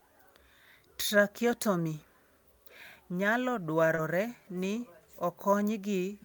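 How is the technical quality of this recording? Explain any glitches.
The recording has one brief glitch, just under four seconds in, where two kinds of packet-loss repair overlap.

From 3.95 to 3.99 s there is short concealed packet loss. The sound smears or wobbles briefly and then settles. About 20 ms of the stream arrived too late to decode, so the receiver invented around 18 ms of fill by extending the preceding sound, following its pitch if it was voiced and using shaped noise if not, before blending back into the real signal.

Inside that stretch, from 3.97 to 3.99 s, the lost packet was rebuilt from error correction. That 20 ms sounds rougher and noisier than its surroundings, but it has no gap. The timing points to a single lost packet whose content was carried as a low-bitrate duplicate in the next packet, using Opus in-band forward error correction. The decoder played that coarser copy in place of the original.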